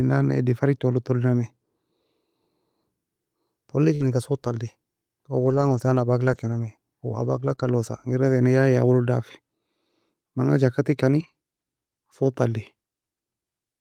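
At 0.87 to 0.93 s comes the first lost packet rebuilt from error correction. About 40 ms of audio, consistent with two missing packets, was replaced by the low-bitrate copy that the following packet carries. Nothing drops out, but that stretch turns coarser and noisier, because the copy holds far less detail than the original.

From 3.95 to 4.05 s there is a burst of packet loss. The receiver extended the last sound for about 48 ms and faded it, giving a short held, dying tail. When playback picks up, roughly 40 ms of material is absent and about 7 ms is dropped to realign timing. Inside this window, 4.00 to 4.02 s is also an error-correction rebuild, so part of the burst sounds rough.

Longer error-correction rebuilds follow at 5.45 to 5.79 s (180 ms), 6.27 to 6.57 s (160 ms) and 7.19 to 7.53 s (180 ms). Each sounds like a grainy stretch rather than a gap.

At 7.55 to 7.59 s a short concealed packet loss fills about 20 ms of missing audio by continuing the preceding sound. 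It is heard as a quick smear or wobble before the real signal returns. It runs straight into another rebuild at 7.59 to 7.69 s, so that stretch stays rough throughout.

Two further rebuilds occur at 8.09 to 8.11 s and 11.19 to 11.29 s. Both bring the same brief coarseness.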